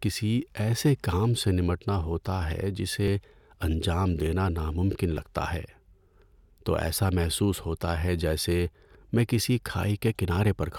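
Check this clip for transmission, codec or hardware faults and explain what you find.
Two short skips turn up in this speech, at 3.08 s just before "انجام دینا ناممکن" and at 5.17 s right after that same phrase. Each is a jump in the sound, only a few milliseconds missing. That pattern points to a likely dropped buffer (overrun): samples weren't collected before the hardware overwrote them, so a buffer's worth vanished and the two sides were butted together with no gap.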